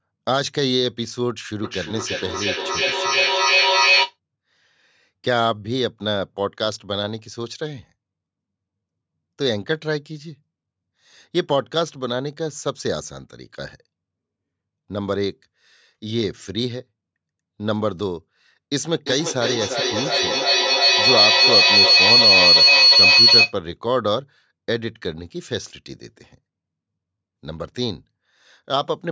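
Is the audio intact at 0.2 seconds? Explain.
Yes, the speech is intact at 0.2 seconds, with nothing at that moment beyond the ordinary call microphone processing, which trims the lowest bass and leaves nothing above 8 kHz.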